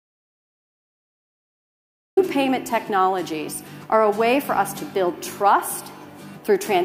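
From the very start until 2.17 s there's an audio dropout to silence, dead silence with no room tone, likely a lost input link before the sound cuts in.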